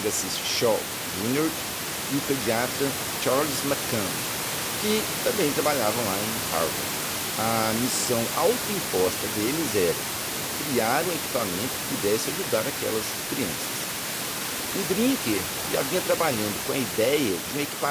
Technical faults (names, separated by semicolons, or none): none